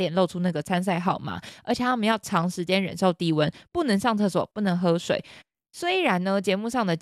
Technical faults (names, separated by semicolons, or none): none